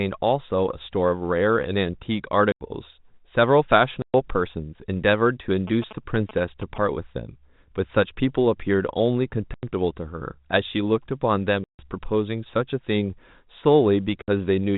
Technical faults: packet loss filled with silence; GSM signalling bursts

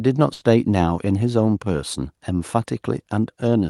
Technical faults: burst of packet loss; short concealed packet loss

